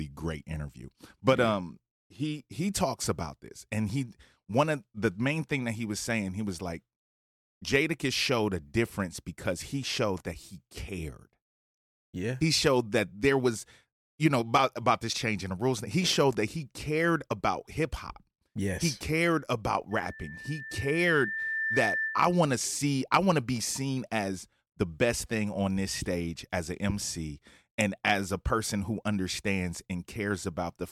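Speech clip with a loudspeaker feedback squeal from 19.91 to 22.51 s, between "cared about" and "to see I want". A single 1.8 kHz tone swells over roughly two seconds until it is about as loud as the speech, because the microphone is picking up its own loudspeaker and the loop gain exceeds one at that pitch. That gradual self-building growth separates it from a steady electrical whine.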